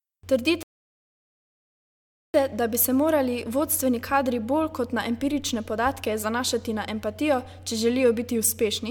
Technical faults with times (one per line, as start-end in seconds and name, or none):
0.63-2.34 rebuffering stall